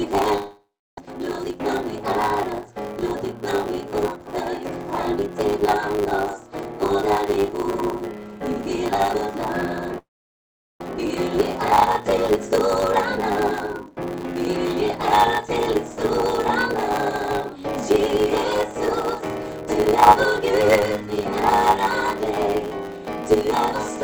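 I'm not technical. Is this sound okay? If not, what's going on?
No. There are three problems.

Block size mismatch (truncated), all the way through: one step in the audio chain hands over chunks of sound bigger than the next step accepts, which fits a 512-sample block, and the extra bit of every chunk is thrown away. That steady chopping makes a buzz at 100 Hz, a hundred times a second, and it squeezes the whole clip to run about 1.07 times faster, though the pitch stays about normal.

Long network dropout, twice: from 0.37 to 0.99 s, and again from 9.98 to 10.82 s. The sound most likely stopped arriving over the connection for a while. The receiver tried to cover the gap by stretching out the last sound it had, which fades into a buzzy hiss and then silence. In the first gap the silence lasts about 0.35 s, in the second about 0.82 s. When the sound returns, half a second of it is simply gone.

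Jitter buffer speed-up, right after each dropout: from 1.06 to 2.45 s, and from 10.89 to 15.18 s. After a gap, the receiver ends up holding a backlog of sound and falls behind. To catch up, it snips out many tiny slivers, trimming roughly 150 ms in the first stretch and roughly 400 ms in the second. The sound runs about 8 to 9 percent faster without changing pitch, so it feels slightly rushed.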